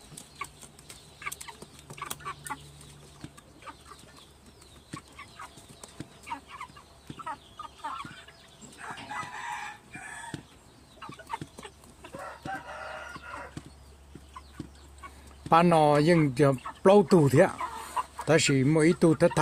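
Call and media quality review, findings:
No faults found in this clip. Nothing to escalate; no component needs follow-up.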